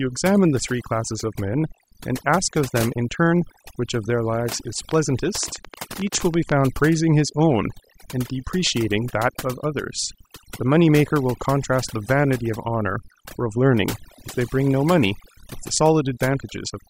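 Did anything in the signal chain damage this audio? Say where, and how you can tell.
Yes. Overdone noise removal runs through the whole speech clip, in the call-processing stage. The background sits near silence with twinkling specks. A suppressor set too strong is cutting bands near its noise estimate, taking quiet speech detail too.

A train of clicks sits from 4.91 to 6.53 s. It runs about 11 clicks per second at an uneven pace, roughly twenty in all. They peak about 10 dB above the speech and tick through pauses too. Nearby interference on the analogue wiring or a faulty connection or power supply is the likely cause.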